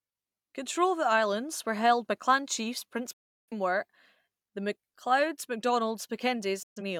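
Right after "held by clan chiefs" the speech drops out at 3.13 s and stays silent until 3.53 s, a classic digital broadcast dropout. The receiver stopped getting usable frames and muted, with a quick 8 ms fade rather than a hard cut. About 340 ms of programme is simply gone, which fits roughly eight lost frames. A shorter hole follows from 6.63 to 6.82 s, about 128 ms missing, consistent with three frames.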